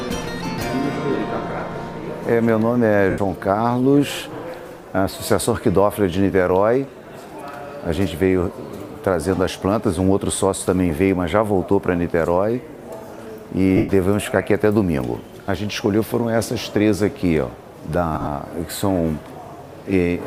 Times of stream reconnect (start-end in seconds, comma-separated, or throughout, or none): none